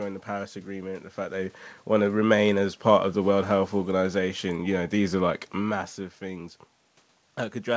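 No technical faults are audible.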